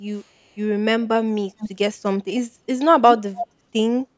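Three bursts of echo leak turn up in this speech, each a copy trailing the voice by about 284 ms. From 0.15 to 0.55 s it's a barely there ghost, roughly 40 dB down. At 1.58 to 1.7 s it's a short, clearly audible scrap, and from 3.08 to 3.47 s it's nearly as loud as the talker. The likely cause is a loudspeaker on the far end whose echo canceller let its own pickup slip back into the call.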